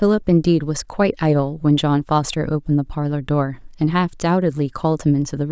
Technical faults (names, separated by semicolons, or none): none